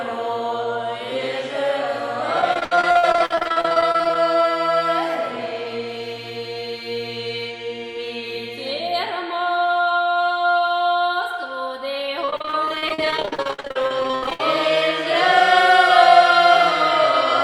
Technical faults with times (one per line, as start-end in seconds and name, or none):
2.41-4.16 repeated packet loss (robotic sound)
12.25-14.40 repeated packet loss (robotic sound)